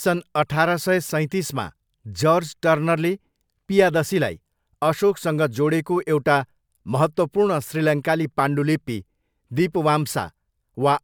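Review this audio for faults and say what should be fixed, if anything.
Nothing here needs fixing; the speech comes across without any technical faults to chase down.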